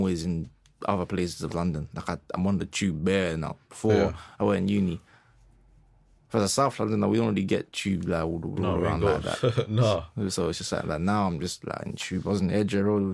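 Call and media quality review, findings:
No audible faults found in this speech recording.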